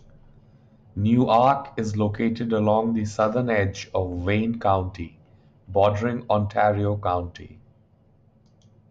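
A speech recording whose signal path carries no audible technical fault anywhere in its duration.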